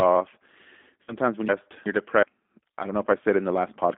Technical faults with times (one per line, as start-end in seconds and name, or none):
0.00-3.98 G.729 codec
1.04-1.15 VoIP packet loss concealed by the speech codec
1.49-2.23 chunks out of order